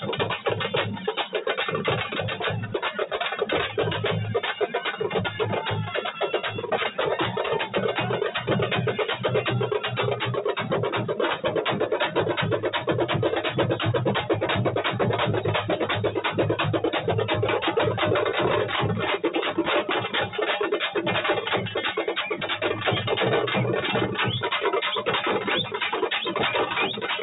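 No technical faults can be heard in this clip; it comes through a call path whose band ends at about 4 kHz, which fits a G.711 mu-law codec.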